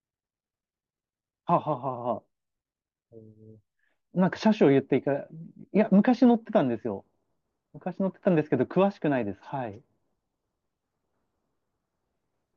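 No technical faults can be heard anywhere in this recording of speech.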